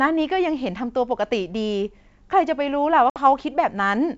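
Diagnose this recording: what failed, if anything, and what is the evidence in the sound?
Packet loss on an ADPCM call, at 3.10 to 3.18 s, at the network stage. About 60 ms of speech, roughly three packets' worth, drops out as a hard-edged silent hole. Where the speech resumes, the decoder's adaptive predictor and step size no longer match the sender's, so the first tens of milliseconds come back slightly distorted until the two states converge. The G.722 wideband path at 64 kbit/s carries the speech with its full upper band around this gap.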